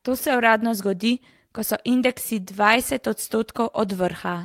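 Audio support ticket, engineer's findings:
Clock drift between sender and receiver, whole clip. Sender clock runs roughly 2% slow. Receiver jitter buffer keeps draining. Symptom: faint, uneven stutter and a slightly dragging pace in the speech. Component: sender audio clock versus receiver playout clock. Mechanism: fewer samples arrive than the receiver plays, so the buffer shrinks steadily. The receiver has to pad the stream to keep playing.

Repeated timing corrections, 0.50 s to 4.39 s. Playback runs at 98% speed. Around 70 ms added in total. Symptom: small hiccups at uneven spacing, tempo wobbling rather than steady. Component: receiver jitter buffer or playout adaptation. Mechanism: short pieces repeated again and again, all stretching the audio, to cover the slow sender. Each edit is tiny, so it reads as unsteady rhythm.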